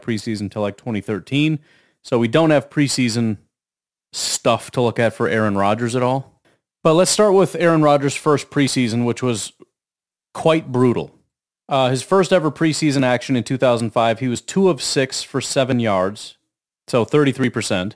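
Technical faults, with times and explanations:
Throughout: aliasing. Content above 11 kHz folds back as gritty, unrelated tones about 25 dB below the speech, consistent with resampling to roughly 22 kHz without an anti-alias filter.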